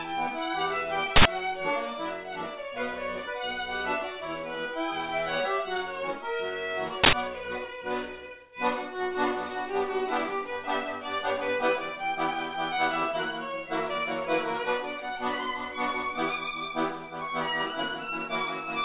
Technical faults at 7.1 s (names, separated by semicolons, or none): uninitialised buffer